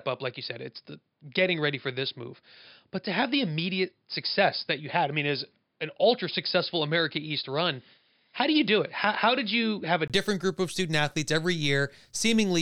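Speech, and for the first 10.1 s it sounds boxed in: nothing above about 5.1 kHz, so it's dull, with a faint new noise floor sitting well below the speech. At 10.1 s there's a brief 20 ms gap, then it opens up at the same loudness. That's most likely an input switched to a poorer device, with the recording swapping back to the better microphone there.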